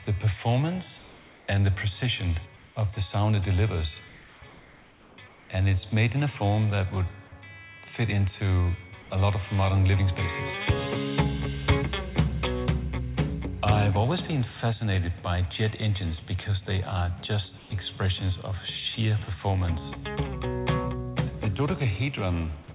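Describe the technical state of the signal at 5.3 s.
At 5.3 s the signal is inside a brief stretch, 5.28 to 5.5 s, where comfort noise replaces the background. For 220 ms the real background, about 28 dB below the loudest passages, gives way to a steady, featureless hiss about 3 dB quieter, likely because transmission paused in a quiet gap and the receiver synthesised filler noise. On a spectrogram the textured floor becomes a smooth, uniform band, still ending at 4 kHz like the telephone-band audio around it. The waveform shows a small, flat dip in level.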